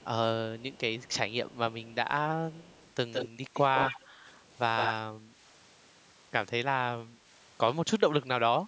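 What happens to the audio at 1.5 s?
A very faint, delayed copy of the speech flickers in from 1.50 to 1.54 s, an echo leak likely from imperfect echo cancellation, lagging about 222 ms.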